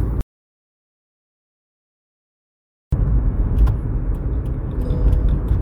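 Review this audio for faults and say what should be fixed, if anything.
Audio dropout to silence from 0.21 s to 2.92 s: roughly 2.7 s of sound vanishes abruptly, likely a lost input or stray mute, leaving a dead-flat waveform and blank spectrogram. Secure connections, disable auto-mute, and monitor input levels during recording.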